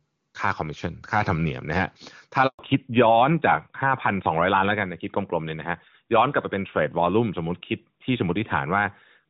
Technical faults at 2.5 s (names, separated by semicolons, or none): handover gap; fallback to narrowband